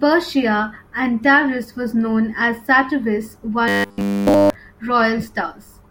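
From 3.68 to 4.55 s the speech turns robotic, the sound of repeated short buffers. A rigid 100 Hz metallic buzz replaces the voice throughout that stretch. The likely cause is a 10 ms chunk looping while fresh audio fails to arrive.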